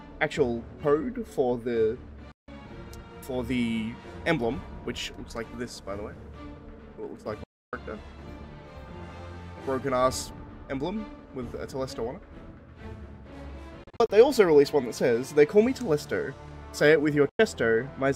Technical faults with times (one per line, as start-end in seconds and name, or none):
2.32-2.48 digital broadcast dropout
7.44-7.73 digital broadcast dropout
13.84-14.10 digital broadcast dropout
17.29-17.39 digital broadcast dropout